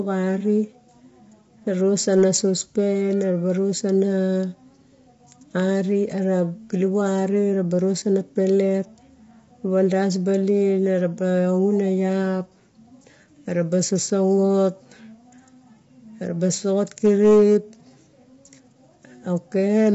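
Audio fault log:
throughout, low-delay AAC compression: The speech sounds rough and grainy, with noise filling the gaps between harmonics and nothing above 7.7 kHz. This is likely AAC-ELD coding. Its short frames resolve pitch poorly, and the damage fits a bitrate near 24 kbps.
1.99 to 2.58 s and 16.98 to 17.56 s, hard clipping: The signal overran a stage's limit by about 5 dB, so the peaks were cut flat, and those flattened tops add harmonics high up the spectrum.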